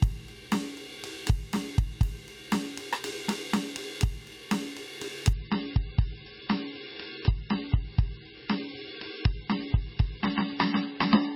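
A music clip where an adaptive stream drops to a lower bitrate at 5.33 s. Treble vanishes above 5.6 kHz and artefacts rise, with no gap, unlike a dropout, which fits a fall from about 128 to 17.5 kbit/s MP3.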